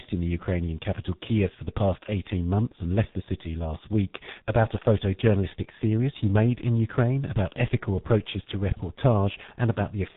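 Tandem speech coding throughout: rough, muffled, warbly speech that sounds like three codecs stacked end to end, the last likely G.723.1, with nothing above 3.8 kHz.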